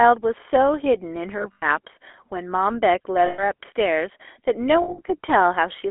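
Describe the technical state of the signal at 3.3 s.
At 3.3 s the signal is inside a burst of lost GSM frames, from 3.26 to 3.44 s. The decoder repeats the last good frame, giving a metallic, held ring rather than a clean dropout or a click. Under it runs the GSM full-rate codec's constant buzzy, gravelly roughness within a 300 Hz to 3.4 kHz telephone band. That roughness is steady throughout, unlike the brief frozen ring.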